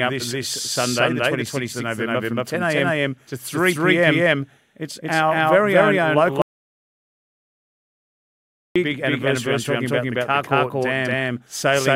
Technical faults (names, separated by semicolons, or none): doubled audio track; audio dropout to silence